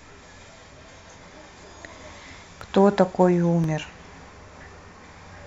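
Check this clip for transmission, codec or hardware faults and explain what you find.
There's one fault here, showing up twice in the speech: a block of digital silence at 2.61 s and again at 3.64 s. The first hole lasts about 0.73 ms, which fits a 32-sample block, and the second about 1.45 ms, which fits 64 samples. The sound cuts out and jumps back with no fade, most likely because the output buffer wasn't filled in time. Being so short, each one comes across as a tick or dip.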